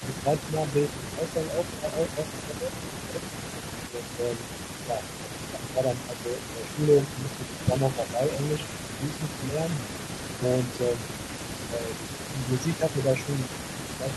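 Speech suppressed in double talk affects four spans: 0.0 to 3.27 s, 3.83 to 8.37 s, 8.98 to 11.08 s and 11.67 s to the end. The level dips by up to about 10 dB in the first two spans, for roughly one and a half and three seconds in total, and by about 5 dB in the last two. The likely cause is the echo canceller attenuating the near talker while the far side was also speaking.

An echo leak runs throughout. A delayed copy of the speech trails it by about 278 ms, at about 15 dB below the main signal. The likely cause is a loudspeaker-side echo canceller that left part of the microphone's pickup unremoved and sent it back.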